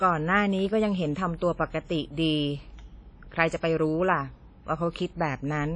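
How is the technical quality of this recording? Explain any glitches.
The technical quality is limited by plainly audible codec damage across the whole clip. It is most likely WMA compression. The speech has a ringing, washy character. A hiss rises and falls with the signal. Nothing is present above 10 kHz, so the top end sounds dull. A transform codec works in long blocks. Its quantisation noise smears over tens of milliseconds around each sound. Weak spectral detail is zeroed. This points to an early WMA encoder at a low bitrate, around 32 kbps.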